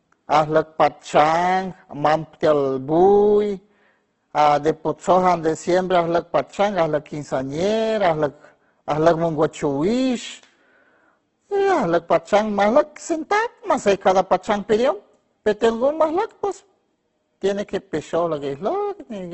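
From start to finish the speech carries Opus compression damage, likely from a low-rate encode, perhaps near 12 kbps in its music mode. Nothing reaches above about 8.1 kHz, and the damage is heavy. Starved bands are filled from copies of lower bands or noise, so the voice turns rough and grainy. Unlike MP3, it keeps band energy intact, leaving few spectral holes and little swirling.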